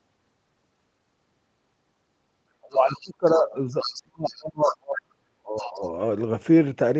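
Speech that ducks and drops out in two stretches, from 2.6 to 3.55 s and again from 3.83 to 5.84 s. The talker's voice sinks deeply, by around 30 dB in the first stretch and around 40 dB in the second, for roughly a second and then roughly two seconds. This is likely speech suppressed in double talk: with both ends talking at once, the echo canceller could not tell the near talker from its own loudspeaker echo and pulled the whole signal down. A second voice also breaks through in short scraps at 2.72–3.09 s, 3.25–3.42 s, 3.8–4.03 s, 4.27–4.43 s, 4.66–4.75 s and 5.56–5.88 s. It sits roughly 10 to 25 dB under the main speech, loudest near 4.7 s. That is likely the other side's voice leaking through, where loudspeaker playback reached the microphone and was not fully cancelled. Across all of it the high end stops at 8 kHz, as expected from the call's Opus path and microphone processing.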